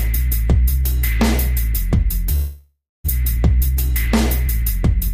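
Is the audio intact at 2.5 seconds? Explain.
No. A long network dropout spans 2.35 to 3.10 s. The last sound smears into a fading buzz, then 240 ms of silence. Audio likely stopped arriving, so 600 ms is lost, and playback resumes about a tenth of a second late.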